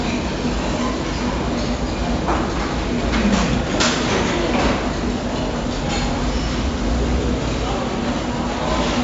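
From start to finish the sound carries 4-bit ADPCM compression. Each sample is coded as a small 4-bit step away from a predicted value, and the step size adapts as it goes. The damage is heavy. A gritty hiss rides on every loud passage and rises and falls with the level. Sharp attacks smear and distort because the step cannot grow quickly enough. Nothing remains above 7.7 kHz, so the top end sounds dull. This fits a 64 kbps stream.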